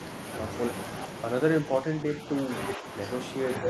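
From 1.82 to 2.18 s the speech sags by about 5 dB over roughly a third of a second, then recovers. It happens again right at the end, 3.58 to 3.69 s, for about a tenth of a second. That's speech suppressed in double talk. The likely cause is the echo canceller hearing both ends at once, mistaking some of the talker for loudspeaker echo, and turning it down, so the sound briefly ducks.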